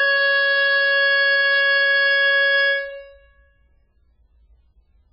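Music with nothing above 5.4 kHz throughout, plus heavy watery, swirling artefacts and smeared attacks. This is likely MP3 compression at a very low bitrate, around 8 kbps. The swirl sets it apart from a plain low-pass filter.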